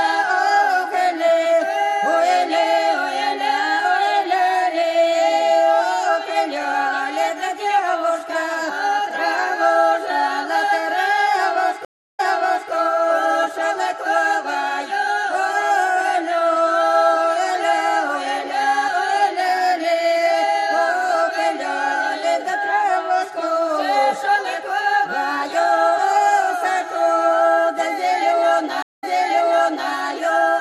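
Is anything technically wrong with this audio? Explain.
Yes, two stream reconnects. At 11.85–12.71 s the audio drops out for 310 ms, then picks up 0.55 s earlier; at 28.83–29.91 s it's 173 ms of silence and a 0.91 s jump back. The connection broke, a fresh decoder restarted, and the server resent a chunk already played.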